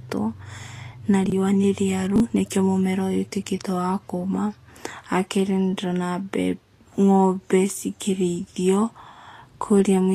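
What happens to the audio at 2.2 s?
Between 2.16 and 2.2 s, 20 ms chunks of speech play out of order: one arrives a chunk late and sounds after the audio that should follow it. The result is a brief jumbled flicker. The waveform shows three abrupt joins.

Vorbis compression, likely at a low bitrate around 35 kbps, also affects this moment. The spectrogram shows nothing above about 14.2 kHz, and the coarsely quantised treble appears as grainy, speckled noise. It sounds hissy, with softened consonant attacks.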